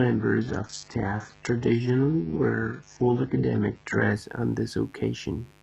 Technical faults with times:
0.00-5.63 mains buzz
0.00-4.13 adaptive stream starting at a low bitrate

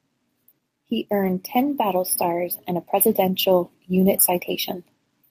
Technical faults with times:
1.23-1.29 lost packet rebuilt from error correction
3.03-3.09 lost packet rebuilt from error correction

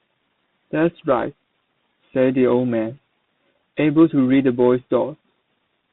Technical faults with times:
0.00-5.92 tandem speech coding

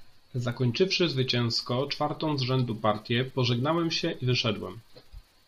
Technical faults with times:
3.28 corrupt frame decoded

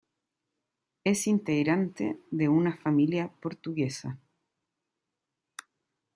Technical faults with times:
none

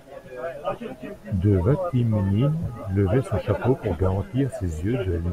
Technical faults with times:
none

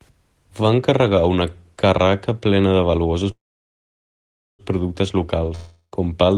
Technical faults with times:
3.31-4.62 call audio freeze
5.55-5.95 long network dropout

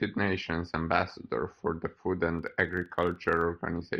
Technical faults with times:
2.39-3.46 filter restarted on every block

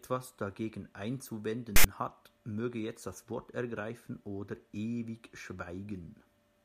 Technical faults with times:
1.76-1.84 file tags played as audio

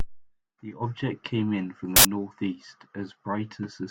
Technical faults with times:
1.96-2.05 uninitialised buffer

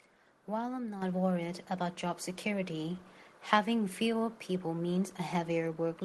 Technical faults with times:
1.02 microphone volume stepped up

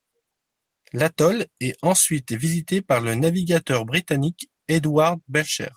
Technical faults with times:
none

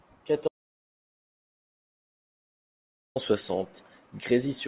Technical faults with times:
0.48-3.16 audio dropout to silence

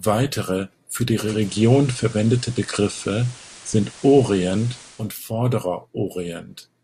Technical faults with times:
1.19-5.12 digital radio blending to analogue

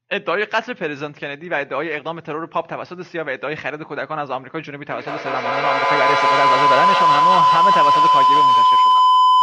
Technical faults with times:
4.92-9.42 feedback howl

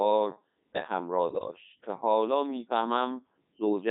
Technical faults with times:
0.00-3.90 Codec 2 vocoder
1.30-1.48 bit errors on digital voice radio

